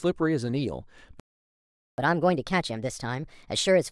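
At 1.20 s the speech stops dead and stays silent until 1.98 s, a gap of about 0.78 s. This is a playback stall, likely caused by the player running out of buffered data or its output thread being blocked. Unlike a dropout, which loses a slice of audio and jumps ahead, a stall pauses the output until the player recovers. The break simply holds the flow in suspense.

From 1.98 s to the end, the player works off its backlog with catch-up at higher speed. It resamples to 1.25 times normal rate, so delivery quickens and pitch rises by roughly four semitones. A pure pitch-shift fault would leave the timing alone. Here pace and pitch climb together, and the change begins at the moment the stall ends.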